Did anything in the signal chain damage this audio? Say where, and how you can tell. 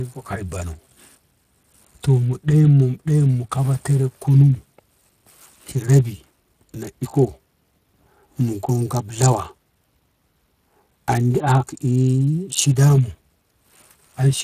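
Yes, at the codec: Speex coding runs the whole way, hoarse and noisy with nothing above 15.1 kHz, which fits a setting around 22 kbps.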